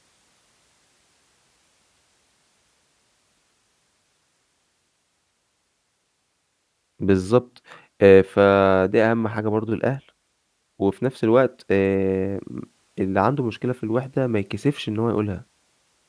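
No audible faults anywhere in the speech recording; nothing to flag.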